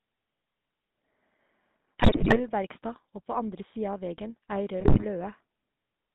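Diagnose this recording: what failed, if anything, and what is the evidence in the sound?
Codec stage: the GSM full-rate codec gives the whole clip a buzzy, gravelly roughness within a 150 Hz–3.7 kHz band, grit that plain band-limiting wouldn't add.

Radio link: GSM bit errors at 1.98–2.41 s and 4.80–5.06 s turn speech into squawks and gargling from corrupted decoder parameters, unlike packet-loss gaps.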